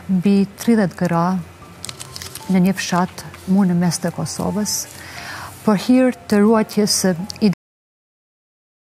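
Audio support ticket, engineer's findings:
Cut-off end at 7.53 s. Sound stops mid-event, straight to digital silence through to the end, no decay tail. Probable component: output/write path. Final buffers never got written or played out, so whatever was sounding just gets chopped. Roughly 1.4 s of dead air after the cut. Worth checking flush/drain on stop, looks like the last chunk was discarded instead of written.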